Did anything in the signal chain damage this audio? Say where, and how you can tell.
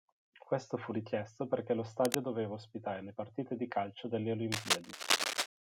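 Yes, in the analogue wiring. Cable scratch noise, roughly as loud as the speech, rasps at 1.98 to 2.18 s after "fu richiesto perché lo" and 4.52 to 5.47 s after "partite di calcio delle". Likely a worn contact.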